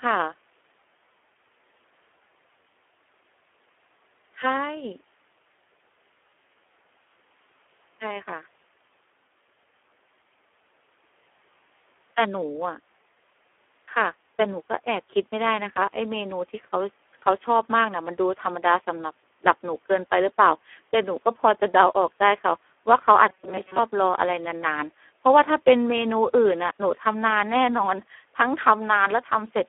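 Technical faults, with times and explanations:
Throughout, Speex codec: the speech passes through a low-rate CELP coder, with the heavy damage fitting about 8 kbps, leaving too few bits to model the excitation. It sounds hoarse and noisy, confined to roughly 300 Hz to 3.4 kHz, with nothing above 3.8 kHz.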